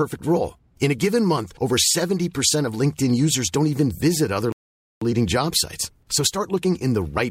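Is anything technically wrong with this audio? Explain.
Yes. At 4.52 s, right after "don't even visit other", the speech cuts to silence for about 0.49 s, then resumes at 5.02 s with "leading job sites". This playback stall likely came from the player running out of buffered data or having its thread blocked.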